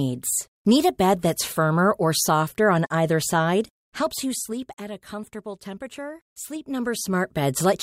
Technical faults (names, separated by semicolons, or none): zipper noise